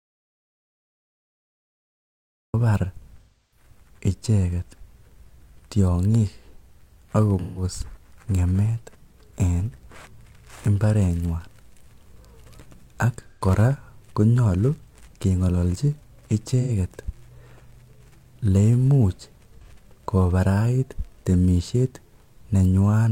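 The speech opens in silence, with no room tone, until 2.54 s. This is an audio dropout to silence already under way when the clip begins. The input was likely lost, so the recorder wrote silence. Anything said then is gone.

AAC frame loss with concealment follows at 3.21 to 3.66 s, 7.39 to 7.63 s, 13.28 to 13.44 s, 16.61 to 16.71 s and 19.64 to 19.70 s. Each patch sounds smeared, noisy or phasey. The decoder rebuilt the missing stretches from the last good spectrum. The losses shrink from about 300 ms to about 40 ms, which fits seven frames down to one.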